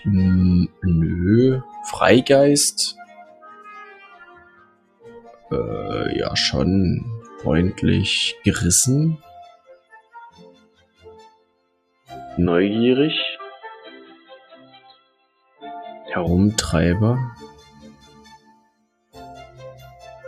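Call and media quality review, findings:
Noise suppressor applied to music or sounds, whole clip: speech-tuned suppression treats sustained content as noise, so level swings by about 15 dB and the sound pumps and thins.

Sound cut by the noise suppressor at 0.68–0.84, 2.93–5.51, 7.21–7.39, 9.51–12.1, 14.17–15.63, 17.99–18.16 and 18.37–19.15 s: held sound and decays pushed down, by up to about 17 dB on the longer spans.

Input switched to a poorer device, 12.46–16.27 s, no gap at the switch: sound dulls, with a narrower band, level down about 5 dB, and a noise floor about 40 dB under signal. Likely a headset call profile or fallback microphone.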